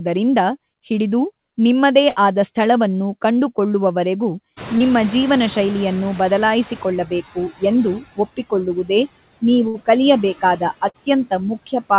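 Throughout, the background sinks between phrases and swells back under the sound. These are noise suppressor artifacts: the suppressor pulls down every band it judges to be steady noise, frame by frame, here by about 18 dB.

From 2.10 to 2.18 s the sound freezes into a held, fading continuation for about 60 ms, then jumps ahead. This is a burst of packet loss: consecutive packets were lost or arrived too late, so the receiver stretched the last sound while attenuating it, and about 60 ms of audio is gone.

From 4.57 s the background, which jumps by about 24 dB around 4.5 s, comes through loud and only gradually recedes until 7.15 s. This is the noise suppressor catching up: its noise estimate lags the sudden rise and needs about 2.6 s to adapt, reaching roughly 11 dB of reduction.

Inside that stretch, from 4.78 to 4.82 s, there is a brief smear. This is short concealed packet loss: about 20 ms never reached the decoder, and the receiver patched it with about 22 ms synthesized from the preceding sound before blending back into the real signal.

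The same held-then-skip effect as at 2.10 s returns from 9.68 to 9.76 s and from 10.88 to 10.96 s. Both are further bursts of packet loss, each about 60 ms concealed and 60 ms missing. Throughout the clip nothing is heard above 4 kHz, which points to a narrowband telephone codec on the call path.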